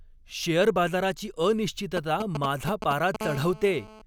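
From 1.97 to 3.16 s, a nearby 2G handset is exchanging short control transmissions with its network, and the audio circuitry rectifies those radio bursts into the signal. These GSM signalling bursts come through as a galloping dit-dit-dit run of ticks and brief buzzes pulsing at about 217 Hz. They sit only a few decibels under the speech, loud enough to compete with it rather than hide beneath it.

From 3.21 to 4.02 s, the handset has moved into an active call and transmits continuously in its 217 Hz burst pattern. The circuitry again demodulates each pulse, now without gaps, producing GSM phone buzz: a hard, raspy tone at 217 Hz with a dense stack of harmonics that has no relation to the speech. It holds steady through to the end of this stretch, at about 12 dB below the speech.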